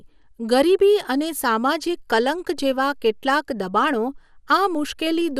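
From start to finish the speech sounds dull and muffled, with a gurgling, granular roughness. This is likely MP2 compression at a low bitrate, which fits roughly 80 kbps, where upper sub-bands switch off and flicker while the remaining bands are coarsely quantised.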